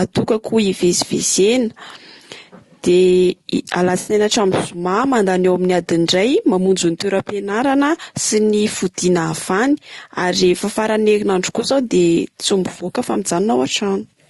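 Throughout, the speech sounds rough and grainy. Noise fills the gaps between harmonics, and the top band sounds thin and synthetic. This is plainly audible codec damage, likely from low-delay AAC compression at a low bitrate, which fits about 32 kbps.

At 3.99 to 4.13 s comes AAC frame loss with concealment. About 80 ms of audio went missing. The decoder filled the gap by reusing the last good spectrum, which fits four lost frames. It sounds like a brief smeared, noisy patch. A second, shorter loss follows at 13.13 to 13.16 s, just after "tsy mivôka fa". About 20 ms is patched over, which fits a single frame. It comes through as a quick phasey smudge.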